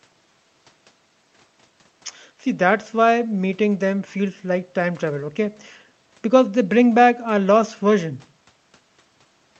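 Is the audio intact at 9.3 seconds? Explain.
Yes, the audio is intact at 9.3 seconds, with no fault at that point.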